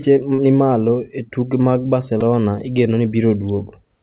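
A speech recording that has passed through a narrowband call path, with nothing above 4 kHz, which fits a G.711-type telephone codec. Two instances of short concealed packet loss occur, at 0.35 to 0.41 s and again at 3.08 to 3.14 s. In each, roughly 30 ms of audio failed to reach the decoder in time, and the receiver covered the gap by extending the preceding sound, either from its pitch or as shaped noise, before crossfading back into the real signal. The result is a brief smear or wobble, and a short consonant may be swallowed. Just after "e tuke mag", at 2.21 s, there is a repeated buffer. The output device ran short of fresh data and replayed its last buffer three extra times. Each copy lasts about 3 ms, which fits a 128-sample buffer. With joins that close together, the stutter is heard as a click or a very short buzz rather than as a repeated syllable, and essentially no audio is lost because of it.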